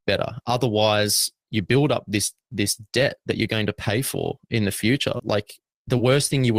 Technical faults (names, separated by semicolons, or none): short concealed packet loss